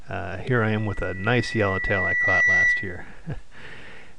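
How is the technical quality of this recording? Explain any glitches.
The recording is marred by a loudspeaker feedback squeal. From 0.51 s a single pure tone at 2 kHz creeps in and swells over roughly two seconds into a piercing squeal, ending up well above the rest of the sound, around 10 dB louder, before it cuts off at 3.07 s. The cause is a microphone hearing the loudspeaker it drives: at 2 kHz the loop's gain passed one, so that tone kept amplifying itself.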